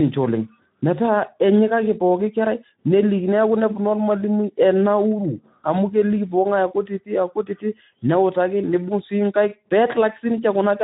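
Speex codec damage runs through the whole recording. The CELP coder has too few bits to model the excitation, so the speech sounds plainly hoarse and grainy, which fits a bitrate around 11 kbps. Nothing is heard above 3.9 kHz, leaving it muffled.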